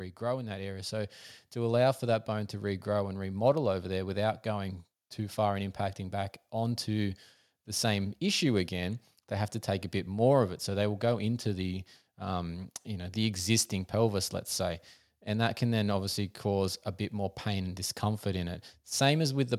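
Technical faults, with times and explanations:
0.31–3.36 s, automatic gain rising: the gain control judged the input too quiet and ramped up by about 5 dB, swelling speech and background together.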